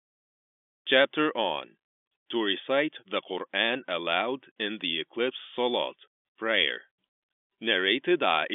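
No technical faults are audible.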